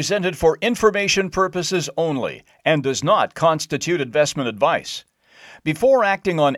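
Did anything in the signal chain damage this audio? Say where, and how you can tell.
No, nothing in the signal chain audibly damaged this speech. No stage of the chain, from capture through to playback, leaves a mark that can be heard anywhere in the clip.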